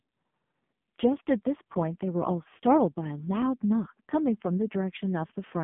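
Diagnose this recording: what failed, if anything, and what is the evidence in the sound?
The failure is at the codec stage: the AMR narrowband mobile codec throughout. Nothing passes above about 3.6 kHz, the band sits between 150 Hz and 3.5 kHz, and the speech sounds buzzy and synthetic. That heavy damage fits AMR-NB's lowest modes, around 5 kbps, where the vocal-tract model gets very few pulses per frame.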